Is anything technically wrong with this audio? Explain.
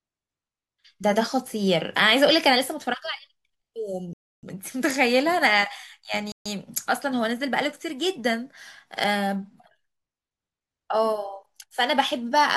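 Yes, the speech drops out twice, at 4.13 to 4.43 s and 6.32 to 6.46 s, going fully silent for about 0.3 s and 0.14 s before resuming. That's likely a Bluetooth stall: delayed packets let the headphones' buffer run empty, pausing playback until retransmissions arrived.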